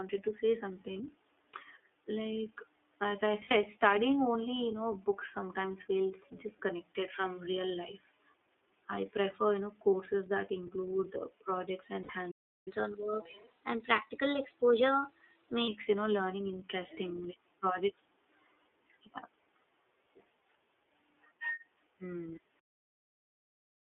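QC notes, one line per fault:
Throughout: iLBC codec. The signal was squeezed through a narrowband VoIP coder, plainly audible here, with the band held to about 250 Hz to 3.5 kHz. The speech sounds boxed-in, slightly rough and synthetic, which fits iLBC's 13.33 kbps mode with 30 ms frames.
0.93 s, 3.44 s, 9.90 s, 12.02 s: lost iLBC frames. Packets went missing, single 30 ms frames at 0.93 and 9.90 s and 60 ms pairs at 3.44 and 12.02 s. The decoder filled each gap by repeating the last pitch cycle with noise, giving a brief buzzy held vowel before the speech snaps back.
12.31–12.68 s: playback stall. The output goes silent for about 0.35 s mid-flow, then resumes. The likely cause is the player running out of buffered data or its thread being blocked, so nothing reached the output until it recovered.
12.68–15.68 s: catch-up at higher speed. To recover the lost time, the player resampled its backlog at 1.1x for three seconds. 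Speech runs audibly faster and about a semitone and a half higher, then drops back to normal pace and pitch.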